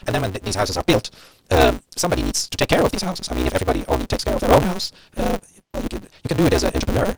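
From start to finish there's a block size mismatch, truncated: each block's tail gets dropped, leaving a 188 Hz buzz and speech racing 1.88 times fast with its timbre intact, which fits 256-sample reads.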